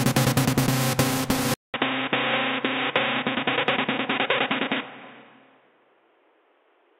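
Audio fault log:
1.54–6.99 s, input switched to a poorer device: a 200 ms silence, then dull, boxy sound with nothing above 3.8 kHz, new background noise about 35 dB down, and unchanged level. This is likely a narrower-band microphone taking over. The spectrogram shows a blank column, then a hard ceiling; the waveform shows a flat gap.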